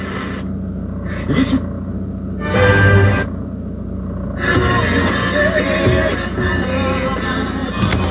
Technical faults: none

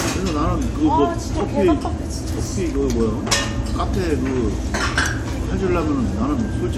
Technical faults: none

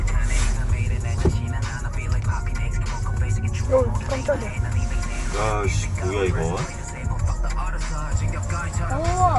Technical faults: MP3 compression

